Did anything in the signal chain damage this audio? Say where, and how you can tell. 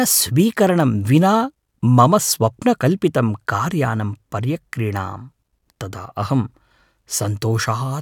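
No, nothing in the signal chain audibly damaged this speech recording. No stage between capture and playback leaves any mark that can be heard.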